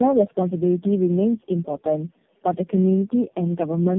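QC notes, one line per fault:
Throughout: tandem speech coding. The speech has passed through four low-rate speech codecs in a row, with plain telephone-rate PCM links between them. It shows compounded roughness, a muffled and warbly character, and no content above 3.2 kHz. Each border decodes to PCM and re-encodes, so every coder models the previous coder's errors as if they were speech. The losses stack rather than averaging out, which makes it sound worse than any single hop would.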